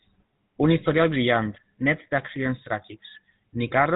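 From start to finish the speech carries GSM full-rate codec damage: nothing above 4 kHz survives, and the coarse pulse excitation at about 13 kbps leaves a plainly buzzy, gravelly edge.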